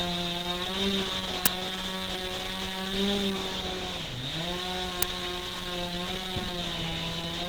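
A recording of everyday sounds, likely encoded with Opus at 16 kbps in its hybrid mode, which leaves the whole band rough, hoarse and grainy with plainly audible codec damage. Twice a playback buffer was played before audio was written to it, an uninitialised buffer, so leftover memory came out as sharp bursts of digital noise: about 11 ms at 1.46 s, fitting a 512-sample block, and about 5 ms at 5.03 s, fitting a 256-sample block.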